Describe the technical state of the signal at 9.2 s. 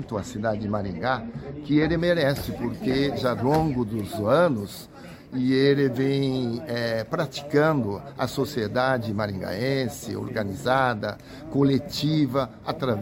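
Nothing is wrong with the signal at 9.2 s; the audio there is intact.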